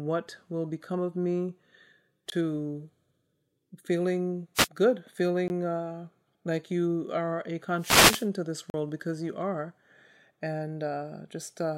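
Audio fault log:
2.30–2.32 s, 5.48–5.50 s and 8.70–8.74 s: block of digital silence. The signal drops to silence for 20 ms, 20 ms and 40 ms, then returns with no fade. The 20 ms gaps are heard as short holes, and the 40 ms gap is long enough to be heard as a brief hole in the speech. This points to output buffers that were not filled in time.
4.55–4.68 s and 7.77–8.28 s: wireless microphone noise hit. The RF signal from the analogue FM transmitter fades as reflected paths cancel. Receiver noise then rises over the speech. The first hit lasts about 130 ms and is heard as a quick swish. The second lasts about half a second and is a longer burst of static.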